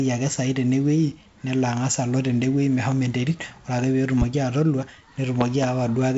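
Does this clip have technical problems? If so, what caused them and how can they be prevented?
Yes. Near the end, two sharp loud pops land in quick succession between 5.41 and 5.66 s, jumping about 15 dB above the speech, which carries on underneath them. The likely cause is a sudden voltage step or pulse, such as a plug being seated, a switch flicked, a static discharge or a driver glitch, that the following circuits shaped into a double thump. Secure connections, switch nothing mid-recording, and ground equipment against static to prevent it.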